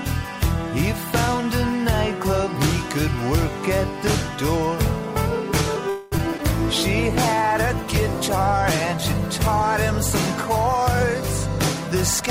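From 5.89 to 6.14 s the audio stalls for about 223 ms, likely a call audio freeze: packets were held up in transit and the jitter buffer ran dry. The receiver stretches the last sound into a fading buzz or hiss, then resumes where it stopped, adding delay rather than losing anything.

Right after, at 6.18 to 6.21 s, 6.31 to 6.34 s and 6.38 to 6.40 s, short concealed packet loss follows. Each time about 20 ms of audio failed to reach the decoder, and the receiver patched the hole by extending the preceding sound. These are heard as three quick smears or wobbles.

From 6.75 to 11.30 s a call bitrate drop takes hold. The bandwidth estimate fell and the encoder went from 96 kbps to 28 kbps, staying at the lowest rate for about 4.4 s. The coarser coding makes the sound rough and watery, with the top end dulled.

Inside that stretch, from 7.35 to 7.55 s, a jitter buffer slow-down appears. The buffer needed more in reserve, so the receiver repeated single pitch periods until it had added 37 ms. 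Playback runs at 85% speed with unchanged pitch, drawing sounds out.

At the end, from 11.88 to 12.23 s, a jitter buffer speed-up runs the other way. The buffer held more audio than its target, so the receiver cut short pitch-period slices, removing about 40 ms. The sound plays at 109% speed at the same pitch and comes across hurried.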